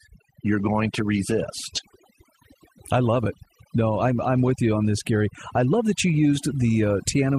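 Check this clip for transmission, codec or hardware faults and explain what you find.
One fault stands out, overdone noise removal, and it runs through the whole speech clip. A noise reducer set too aggressively is switching individual frequency bands down or off whenever they sit near its noise estimate. That takes the quieter parts of the voice with it. The background drops and breaks up into twinkling specks.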